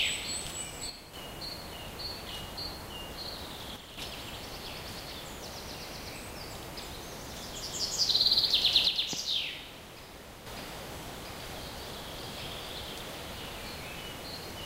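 One channel drops out at 0.90 to 1.13 s, again at 3.76 to 3.98 s, and for a longer stretch from 8.87 to 10.46 s. Each time the sound falls abruptly by about 6 dB and then snaps back, with no fade either way. That step is what remains when material shared by both sides loses half its contribution in a mono sum, so the likely cause is one stereo channel briefly cutting out.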